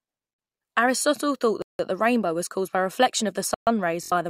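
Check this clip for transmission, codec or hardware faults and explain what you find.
Two kinds of fault are present in this speech clip: three blocks of digital silence and one burst of Bluetooth stutter.

Blocks of digital silence occur at 0.34–0.38 s (about 43 ms), 1.62–1.79 s (about 171 ms, just before "the rainbow was caused") and 3.54–3.67 s (128 ms, just after "by reflection of the"). In each case a run of samples was zeroed, typically because the output buffer was not filled in time. The first two lengths fit 2048- and 8192-sample buffers at 48 kHz. Each gap starts and ends abruptly. The shortest sounds like a short hole, and the longer two are audible holes.

Bluetooth stutter occurs at 4.04–4.12 s, shortly after "by reflection of the". Over about 70 ms the receiver lacked fresh packets and kept replaying its last buffer, which is consistent with three lost frames. A short slice of sound repeats in quick succession, giving a brief buzzing, machine-gun texture. 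Playback then resumes further along, so the missing portion is skipped instead of delayed.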